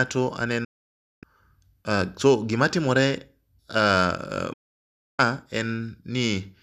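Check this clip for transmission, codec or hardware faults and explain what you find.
The speech cuts to silence twice, at 0.64 to 1.23 s and again at 4.53 to 5.19 s, each time dropping out within about 8 ms and then resuming further along. These are digital broadcast dropouts. The receiver stopped getting decodable frames and muted until valid ones returned, so the roughly 0.58 s and 0.65 s gaps are simply missing audio. Their lengths fit about two dozen lost frames of around 24 ms each.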